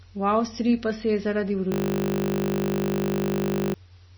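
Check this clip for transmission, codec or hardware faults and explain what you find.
Two faults are present in this speech.

Throughout, the treble stops dead at 5.9 kHz and the sound is watery and swirly. This is likely heavy MP3 compression at a low bitrate, nearer 24 kbps than normal.

From 1.72 to 3.74 s there is a system hang loop. The system froze while the hardware replayed one 20 ms buffer. It sounds like a steady 50 Hz buzz, and about two seconds of speech are lost.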